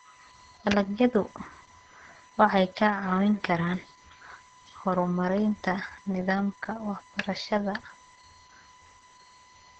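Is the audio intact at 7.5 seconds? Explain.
No. A USB whine runs through the whole clip, including 7.5 s: a steady 1 kHz tone from the bus's 1 ms current frames leaking in, roughly 30 dB below the sound. It shows as a flat horizontal line on a spectrogram.

Opus voice compression also covers the whole clip. Its heavy SILK coding, which fits a bitrate near 10 kbps, leaves the speech muffled, hoarse and slightly robotic. On a spectrogram, smeared harmonics and energy in 20 ms blocks sit below an empty band above about 13.9 kHz.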